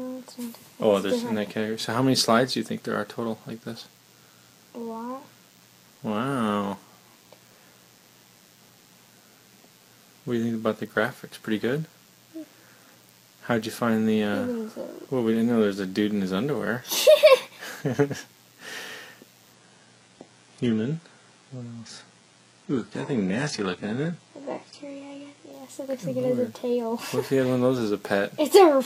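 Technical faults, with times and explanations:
Throughout: DECT cordless phone buzz. A thin, steady buzz sits under the sound for the whole clip. It is a 100 Hz tone with a dense stack of harmonics that make it sound wiry rather than like a smooth hum, and it sits well down, roughly 35 dB below the programme. A DECT handset or base nearby sends a short radio burst every 10 ms, and the audio circuitry rectifies those bursts into this buzz.
19.53 to 25.53 s: adaptive stream at a lower bitrate. For these six seconds the top end suddenly goes dull and synthetic. Nothing comes through above 11.1 kHz, coding artefacts become more noticeable, and then the full quality snaps back with no gap either side. The player dropped to a much lower-bitrate version of the stream while the connection was slow. The change in character fits a move from plain AAC to a very low-rate HE-AAC version, around 12 kbit/s, which rebuilds the treble synthetically.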